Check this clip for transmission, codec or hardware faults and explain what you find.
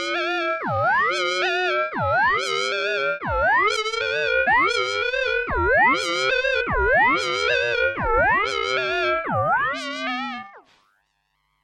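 Compressed frames skipped occur twice in this everyday-sound recording, at 4.46 s and 6.6 s. Whole compressed frames, which sound like about 23.2 ms each, never reached the output. The audio jumps forward, dropping about 300 ms (roughly fifteen frames), then about 100 ms (roughly four frames), with an abrupt join at each point.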